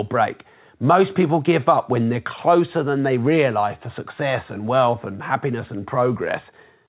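Nothing stood out on listening to this speech, which has come through a call path using G.711 mu-law at 64 kbps, so it carries nothing above 4 kHz.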